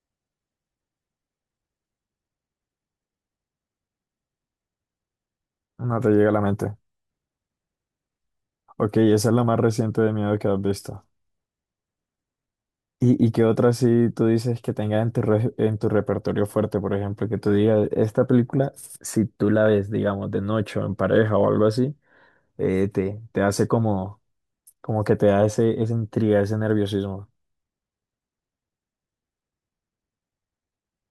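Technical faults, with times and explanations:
0.00 to 2.00 s, adaptive stream starting at a low bitrate. The speech opens dull and smeared, with the treble thin or missing and a watery, swirling edge on the sound. This fits a low-bitrate MP3 around 40 kbit/s. The player began on that version so playback could start at once. At 2.00 s it switches to a higher tier, which sounds like about 128 kbit/s. The treble and clarity return suddenly, with no gap or dropout.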